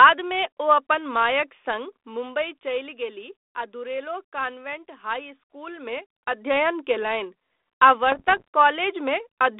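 From 8.12 to 8.48 s the speech breaks into pops and rough bursts with brief level jumps, the sound of bit errors on an ADPCM link. Errors at a rate likely under one percent corrupt the G.726 stream, which runs at 32 kbit/s within a 300 to 3600 Hz band. Each hit throws off the decoder's step size and predictor, so the damage rings on for a few milliseconds.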